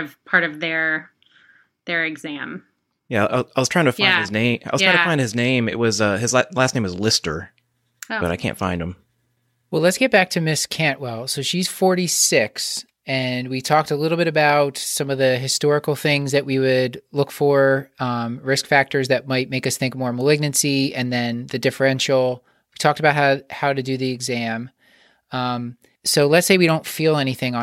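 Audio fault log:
No faults heard in this speech recording.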